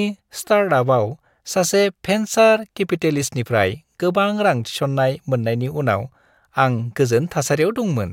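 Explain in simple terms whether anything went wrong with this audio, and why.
Nothing went wrong here.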